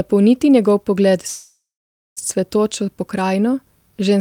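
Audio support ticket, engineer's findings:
Speech halts at 1.27 s, right after "njegov pogled". The last sound hangs as a fading buzz, then about 0.55 s of silence. Audio resumes at 2.19 s with nothing lost, now running 0.89 s late. Call audio freeze, likely packets stalled in transit, jitter buffer ran empty, receiver stretched the final sound until delivery resumed.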